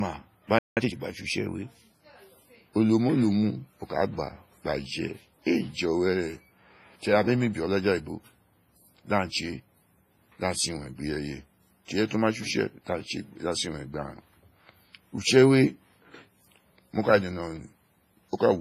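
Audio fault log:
throughout: WMA compression. Heavy smearing within the speech points to a likely low-bitrate Windows Media Audio encode, which fits a rate around 24 kbps. Long transform blocks spread quantisation noise for tens of milliseconds around each sound, so consonants ring and a hiss swells and fades with the speech. On a spectrogram the upper band looks patchy, with weak detail missing as isolated holes.
0.59 to 0.77 s: playback stall. The speech cuts off mid-flow and the output falls silent for 180 ms, likely because the player ran short of data or its thread was held up. The waveform drops abruptly to a flat line and then resumes. On a spectrogram this shows as a clean vertical gap through all frequencies, with sharp edges on both sides and no fade in or out.
0.77 to 0.95 s: time-compressed catch-up. Right after the gap the speech runs at twice normal speed for about 0.18 s while its pitch stays put. 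The player is working off its backlog by removing short slices and cross-fading the remainder, which gives a hurried quality. On a spectrogram the harmonics keep their spacing but syllable patterns are packed tighter in time, and faint seams may appear at each splice.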